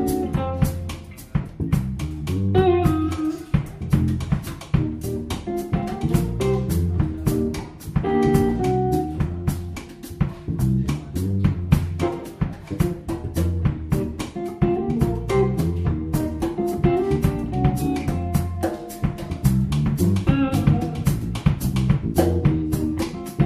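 No technical faults can be heard anywhere in the signal.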